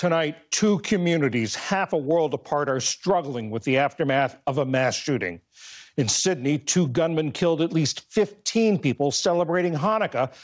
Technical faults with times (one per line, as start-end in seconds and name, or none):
0.00-10.43 gain pumping